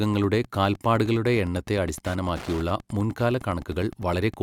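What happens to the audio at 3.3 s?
At 3.3 s the speech is carrying Wi-Fi interference, which runs through the whole clip rather than starting there. A nearby Wi-Fi radio's signal is being picked up and rectified by the audio circuitry, so its beacon, transmitted every 102.4 ms, turns into an audible click. The result is a steady ticking just under ten times a second, sitting roughly 20 dB below the speech.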